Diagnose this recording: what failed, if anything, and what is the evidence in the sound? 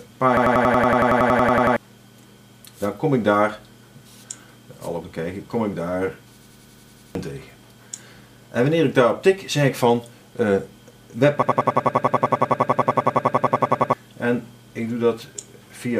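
System hang loop at the driver or buffer stage. At 0.37–1.77, 6.41–7.15 and 11.42–13.93 s one 93 ms slice repeats exactly, a 10.8 Hz machine-gun stutter that fits a frozen driver's 4096-sample ring buffer. Waveform and spectrogram show identical blocks repeating every 93 ms.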